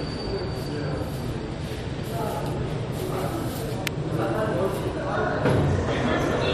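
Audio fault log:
3.87 s, electrical switching spike: a sharp snap, over in about 3 ms, sitting right on top of the sound rather than coming from it. It has that dry, instant crack you get when something nearby switches and the audio line picks up the arc, most likely a switch, relay or motor kicking in close to the cabling, or a bit of static discharge. Because it's so brief, it reads as a click, not a thump or a buzz.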